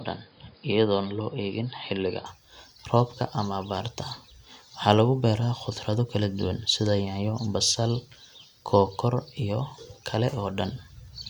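From 0.0 to 2.26 s the speech is dull, nothing above 5 kHz, with extra noise, likely from an input switched to a poorer device.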